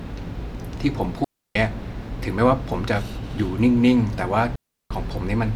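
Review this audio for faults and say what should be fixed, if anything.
Two digital wireless dropouts break the speech, from 1.24 to 1.55 s (about 310 ms) and from 4.56 to 4.91 s (about 350 ms). Each time the receiver stops getting enough usable data and mutes with a near-instant fade, leaving a clean hole of near silence. No hiss or crackle comes before or after it, which separates this from an analogue wireless dropout, where the failing signal brings noise bursts or squelch pops. Keeping the transmitter in clear line of sight and within range of the receiver prevents it.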